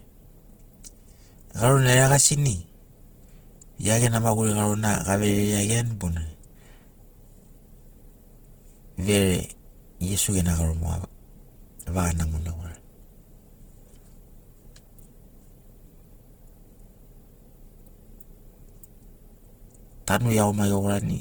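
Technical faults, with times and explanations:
Throughout: Opus compression, likely in its music (CELT) mode at a low rate near 16 kbps. The speech sounds rough and grainy, with noise-filled bands standing in for detail the encoder could not afford, though the audio still reaches about 20 kHz.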